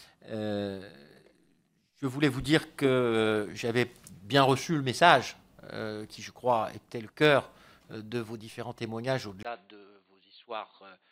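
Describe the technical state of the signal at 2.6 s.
At 2.6 s the signal is intact, with no dropout, clipping, glitch or other technical fault at that moment.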